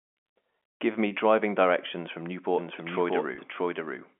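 A speech clip over a telephone line, band-limited to roughly 250 Hz to 3.4 kHz as G.711 coding would give. There's packet loss with pitch repetition at 1.08 s and again at 3.35 s. Each time about 30 ms of audio goes missing, which fits three lost 10 ms packets, and the receiver covers the gap by looping the last pitch period, so you hear a brief held buzz. From 2.58 s to the end there's a doubled audio track: a second full-band copy at about the same level, running roughly 0.7 s behind, with no room decay and an abrupt entry. It's likely a second, slower capture path mixed back in.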